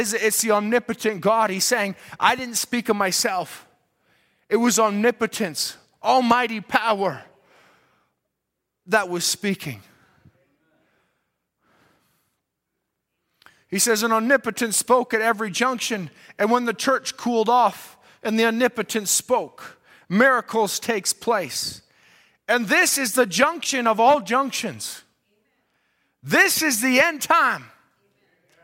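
No technical faults are audible.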